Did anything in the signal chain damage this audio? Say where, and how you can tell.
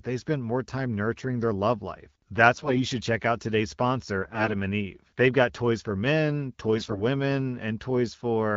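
Yes, at the network stage. AMR bit errors cause three hoarse, gargly bursts at 2.54–2.84 s, 4.22–4.54 s and 6.76–7.03 s, over the AMR wideband carrier. Pitch and level hold. Flipped low-priority bits misplace excitation pulses and skew fine spectral parameters.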